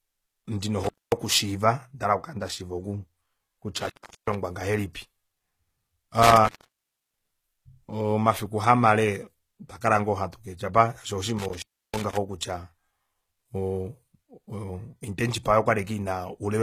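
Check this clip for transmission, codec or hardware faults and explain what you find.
Two faults are present: codec damage throughout and four brief signal breaks.

HE-AAC compression, throughout: the treble is plainly damaged and stops above 14.9 kHz, which fits a low bitrate of around 20 kbps. The likely cause is spectral band replication. The encoder keeps only the lower spectrum and rebuilds the highs from copied lower bands, so the top end does not match the original harmonics.

Intermittent contact, at 0.84–1.12 s, 3.82–4.35 s, 6.23–7.31 s (just before "omafiku kamale otwa kala") and 11.38–12.17 s: a loose connection opens briefly and the speech breaks up and drops out. Each break contains an open stretch of 235, 381, 614 and 316 ms respectively, where the signal path is interrupted.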